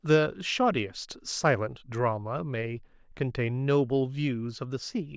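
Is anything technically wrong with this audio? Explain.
No, nothing technically wrong is audible in this speech recording.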